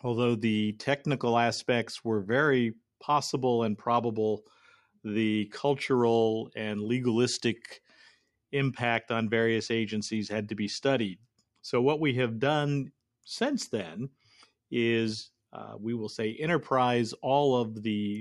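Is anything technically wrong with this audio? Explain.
No, nothing technically wrong is audible in this speech recording.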